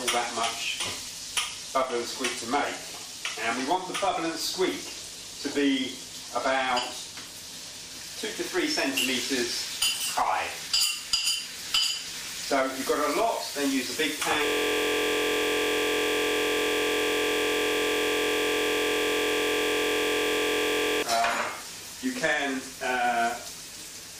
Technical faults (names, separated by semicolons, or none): system hang loop